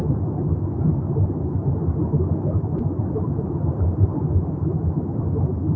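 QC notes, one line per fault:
2.78–2.81 s, loud pop: a sudden voltage step or pulse, likely from a plug, switch, static discharge or driver glitch, entered the signal chain and was added to the audio for under 30 ms. It lands as a single sharp pop peaking roughly 10 dB above the surrounding sound, which carries on underneath. The call microphone processing has nothing above 8 kHz.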